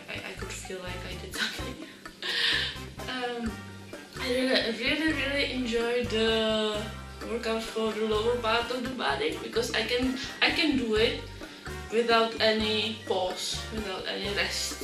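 Throughout the audio there is plainly audible MP2 compression damage: the top end is dull, and a gurgling, granular roughness clings to what remains. This likely comes from MPEG Layer II coding at a low rate, consistent with roughly 80 kbps, where upper sub-bands run short of bits, switch on and off, and the surviving bands are coarsely quantised. Unlike a steady low-pass filter, the missing treble here flickers in and out, and the grain sits within the audible bands themselves.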